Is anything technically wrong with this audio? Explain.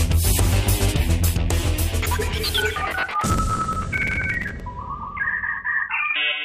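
Yes. From 3.11 to 4.60 s there is processor overload crackle: the processor repeatedly misses its deadlines for buffers of roughly 5 ms, about 70 of them over the stretch, and replays stale audio in each slot. The sound turns gritty and torn, showing on a spectrogram as dense vertical broadband streaks and in the waveform as repeated hard-edged discontinuities.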